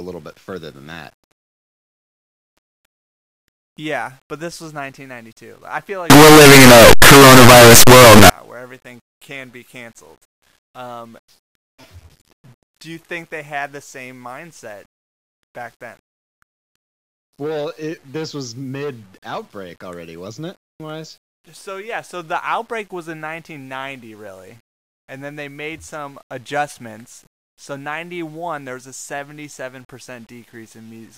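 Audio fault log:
6.1–8.3 s, signed and unsigned mixed up: After "I feel", the speech becomes very loud, harsh distortion until "where everything can be". Quiet moments blast as loud as the rest. The 8-bit samples were likely read with the wrong sign, flipping the top bit. Each zero crossing jumps across the full range.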